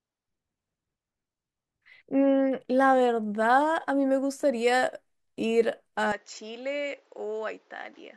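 Input switched to a poorer device at 6.12 s, running to the end at 8.16 s in this speech recording: with no gap, the sound turns duller, loses everything above 7.6 kHz, drops roughly 10 dB, and gains a new noise floor about 35 dB down, likely from a different microphone taking over.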